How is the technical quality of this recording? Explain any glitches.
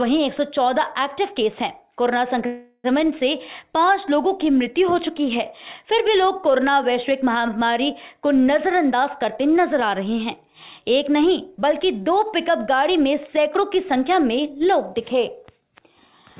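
The recording has one clear glitch, a call audio freeze, and the whole clip is band-limited with nothing above 4 kHz, which fits a G.711 mu-law call codec at 64 kbps.

From 2.46 to 2.86 s the sound stalls into a fading continuation of its last moment for about 380 ms, then resumes exactly where it stopped, with nothing skipped. The likely cause is delayed packets draining the jitter buffer, so everything afterwards runs about 380 ms later.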